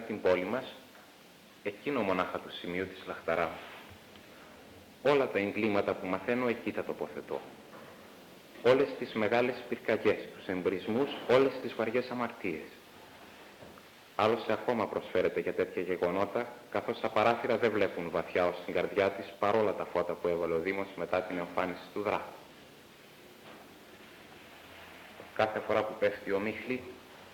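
No technical faults are audible.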